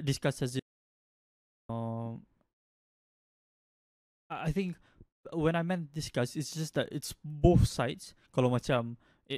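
Speech with an audio dropout to silence from 0.60 to 1.69 s: about 1.1 s of silence, likely a lost input, showing as a flat waveform and blank spectrogram.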